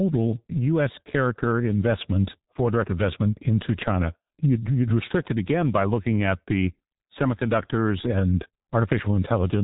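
G.723.1 codec damage runs throughout the speech: heavy, with nothing above 3.8 kHz, and hoarse, muffled, smeared consonants that fit a bitrate around 6.3 kbit/s.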